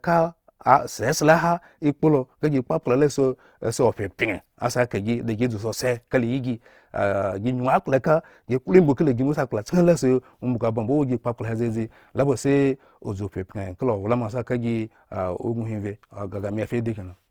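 Opus compression runs throughout the speech. The sound is plainly grainy and rough. Fine detail has turned into a noisy texture. This is likely from Opus in its CELT music mode, refilling bands with noise when bits ran short, which fits roughly 24 kbps. Content still reaches 20.4 kHz.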